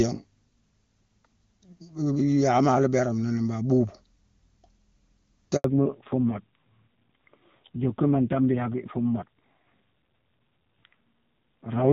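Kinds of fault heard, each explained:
Handover gap: the call switched networks and speech frames stopped arriving, so the sound drops out for about 80 ms at 5.56 s.
Fallback to narrowband: right after that gap the call lands on a much lower-rate narrowband codec, so everything above 4 kHz is gone and the speech sounds duller and rougher.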